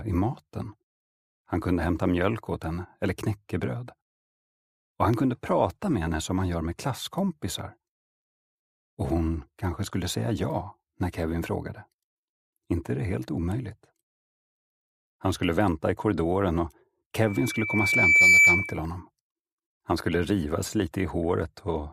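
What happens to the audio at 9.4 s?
Nothing goes wrong at 9.4 s; the audio runs through that moment intact, with no dropout, click or other fault.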